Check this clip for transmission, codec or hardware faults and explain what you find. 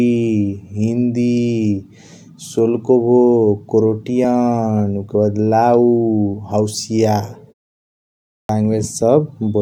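One fault, a clipped start after a pause: at 8.04 to 8.49 s, the output device wakes late after a 0.59 s silence, losing 450 ms. The waveform jumps straight from flat to full level, with no onset.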